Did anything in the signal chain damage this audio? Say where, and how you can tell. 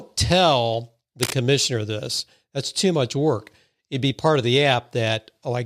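Yes. The damage sits in the analogue wiring. From 1.2 to 1.35 s a dense, ragged burst of cable scratch noise lies over the speech. It is only a little quieter than the speech itself. The burst is uneven and crackly, not a clean click or a steady hiss. That points to a contact whose resistance jumps about as it moves. A worn cable or connector being shifted is the likely cause.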